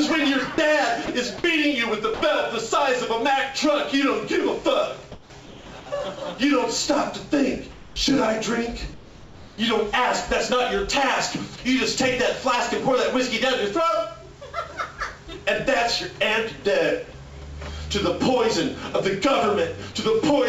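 Throughout the clip the converter's sample clock shows sample clock jitter, wandering by a microsecond or two, so each sample is taken slightly early or late. The timing error matters most where the waveform moves fastest, leaving a faint grainy hiss about 35 dB under the signal. It thickens on loud, bright passages and disappears in the gaps, and it sits inside a band that stops at 8 kHz on the G.722 call path.

Between 0.54 and 0.58 s, 1.06 and 1.08 s, 1.38 and 1.44 s, and 2.14 and 2.22 s, the sender's voice detector has likely classed live sound as background and stopped transmitting. This is sound dropped by the voice detector. The receiver fills each hole with generated noise, so 20 to 60 ms of real sound vanishes into a brief flat hiss before it snaps back. The longest loss is the 60 ms at 2.14 s.

From 5.12 to 5.66 s, 7.72 to 7.96 s, and 8.94 to 9.58 s, the line enters discontinuous transmission and the receiver substitutes comfort noise in place of the background. 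This is likely RFC 3389 comfort noise. In the last two spans, the genuine background, sitting about 21 to 22 dB under the loud parts, is replaced by a smooth, detail-free hiss about 3 dB quieter. The background seems to dip and go lifeless until sound resumes.

At 11.56 to 11.58 s, the voice detector likely cuts out once more. Another 20 ms of sound is swapped for the same flat hiss, heard as a tiny blink in the audio.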